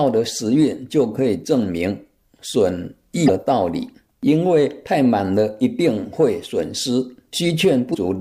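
At 3.26 to 3.30 s and again at 7.91 to 7.95 s, damaged data in a compressed stream makes the decoder misread the corrupted frames and lose sync while it hunts for the next valid header, leaving two brief disturbances of about 45 ms each in the sound.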